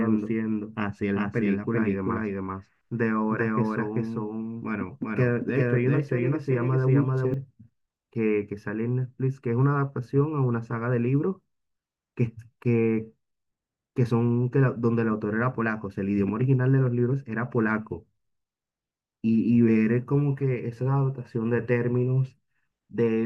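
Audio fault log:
0.00–7.34 s, doubled audio track: the speech is already doubled when the clip opens, with a second, equally loud full-band copy trailing roughly 400 ms behind and no decay or room colour, then vanishing abruptly at 7.34 s. This likely comes from the same signal being captured twice through a slower second path.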